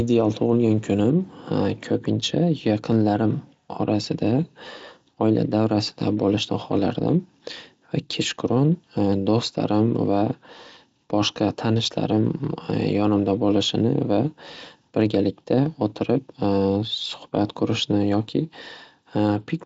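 Nothing in this speech recording stands out as a fault, and the Speex coding underneath sounds like it's running at a fairly generous setting, leaving little if anything of itself to notice.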